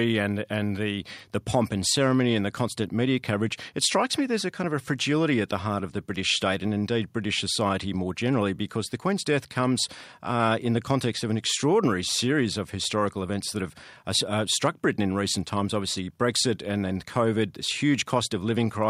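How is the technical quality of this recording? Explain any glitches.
The technical quality of this recording is sound, with no glitches to explain.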